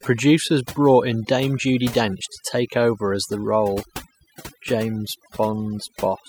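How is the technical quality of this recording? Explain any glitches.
The quality is compromised by one fault that runs through the whole recording. The gaps between phrases fall to an unnatural near-silence dotted with twinkling, warbling specks. This is overdone noise removal: a noise reduction stage set far too aggressively pulls individual frequency bands down or off whenever they resemble its noise estimate. Quieter parts of the speech get caught and stripped away along with the background noise.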